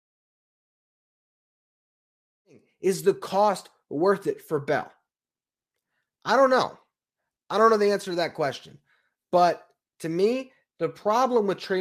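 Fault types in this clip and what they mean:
Nothing here counts as a fault; the speech just eases in at the start the way an editor would set it up, and there's nothing wrong to point out.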